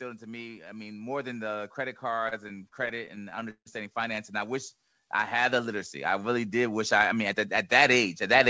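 From 0.05 s to the end, automatic gain rising lifts speech and background together. The waveform envelope widens steadily and the spectrogram brightens overall, with energy stopping near 8 kHz, consistent with a wideband call codec.

Between 2.12 and 3.68 s come repeated stalls (stutter): about two dozen jitter-buffer underruns, the longest 158 ms, were filled by continuing the previous sound. Roughly a quarter of that span is concealed, so the speech drags and stutters. On the spectrogram these look like smeared, stretched harmonics, and the longer gaps fade in the waveform.

From 4.77 to 5.18 s, a jitter buffer slow-down repeats pitch periods to add about 70 ms, playing at 85% speed without any pitch change. Harmonic bands stay level but stretch sideways, and the waveform shows repeating cycles.

From 7.33 to 8.36 s, a jitter buffer speed-up trims short pitch-period pieces, around 70 ms in total, so the speech runs at 105% and sounds slightly hurried. 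Spectrogram features compress horizontally while their frequencies stay unchanged.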